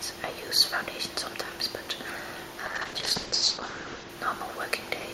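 A call bitrate drop runs from 2.67 to 4.15 s. The encoder's budget falls from 96 to 8 kbps and sits at that floor for 1.37 s. Coding turns coarse and the bandwidth narrows from 20 kHz to 8 kHz, leaving the sound rough and muffled until recovery.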